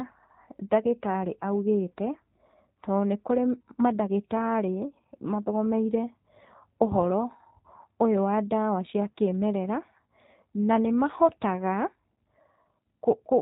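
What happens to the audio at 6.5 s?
At 6.5 s the speech carries G.729 codec damage, which runs through the whole clip rather than starting there. The coder rebuilds speech from a vocal tract filter, a pitch predictor and a few pulses per 10 ms frame, so nothing above 4 kHz survives, and the voice sounds plainly rough and synthetic. That buzzy, model-built texture, which fits an 8 kbit/s G.729 coder, sets it apart from a clean narrowband band-limit such as G.711.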